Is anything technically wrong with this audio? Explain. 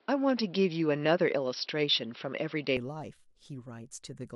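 Yes. From 0.0 to 2.77 s the speech sounds dull and boxy, with nothing above 5.6 kHz, a level shift of about 5 dB and a faint new noise floor, before clearing abruptly without a gap. The likely cause is an input switched to a poorer device with a narrower band.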